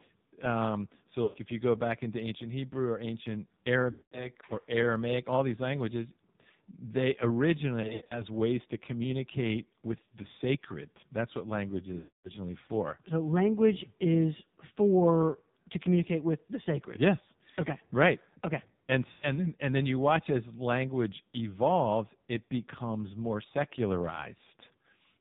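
The whole speech clip has run through the AMR narrowband mobile codec, so nothing above 4 kHz survives, and the heavy squeeze gives it a buzzy, synthetic edge, which fits the low 5.9 kbps mode.

Then there are lost AMR speech frames, where the decoder patches over dropouts by stretching the last good sound and fading it. Short ones land at 1.24 to 1.39 s and at 19.12 to 19.31 s, just before "then and then you". A longer fade comes at 3.92 to 4.28 s after "or ancient". Choppy scattered gaps fall at 7.82 to 8.22 s before "ways to communicate". The longest drop, at 11.98 to 12.30 s, goes briefly silent.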